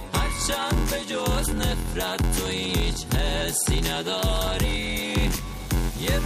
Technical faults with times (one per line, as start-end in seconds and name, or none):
0.00-6.25 block size mismatch (padded)